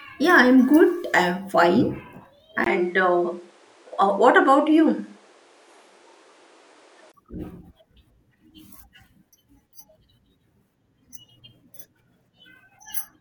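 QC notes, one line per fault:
2.64 to 7.14 s, input switched to a poorer device: a brief gap of about 20 ms at 2.64 s, then duller sound with nothing above 11.4 kHz and fresh background noise about 35 dB down, at unchanged level. This is likely another microphone taking over. On a spectrogram the top band cuts off flat; the waveform shows a notch.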